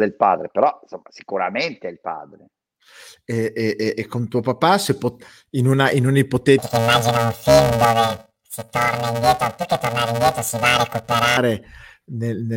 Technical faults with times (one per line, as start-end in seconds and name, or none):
6.58-11.37 planar audio read as interleaved